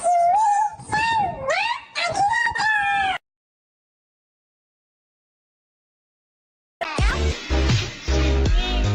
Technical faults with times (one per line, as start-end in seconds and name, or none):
5.22-8.94 call bitrate drop